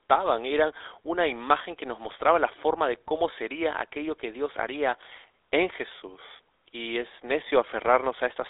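A speech clip that's been through the GSM full-rate codec the whole way. The band sits at roughly 300 Hz to 3.7 kHz with nothing above 3.8 kHz, and there's an obvious buzzy, gravelly roughness from the pulse-driven vocal-tract model, consistent with a 13 kbps stream.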